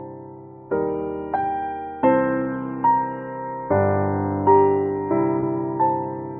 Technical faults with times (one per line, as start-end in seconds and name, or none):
5.40-5.43 short concealed packet loss